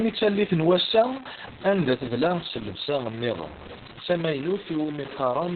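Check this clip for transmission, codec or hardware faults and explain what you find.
Two faults run through the whole speech clip.

Low bit depth without dither runs from start to end. The speech has a harsh, grainy distortion that tracks its level, sitting roughly 15 dB below the signal. Quiet passages turn gritty. The likely cause is truncation to very few bits, around 5, with no dither to smooth the rounding error.

Opus voice compression is also present throughout. Nothing is heard above about 4.4 kHz, so the speech is narrowband, muffled and hoarse, with a robotic edge. This points to Opus in its SILK speech mode at a very low bitrate, around 6 kbps. At that rate the band is cut and the excitation is coded coarsely.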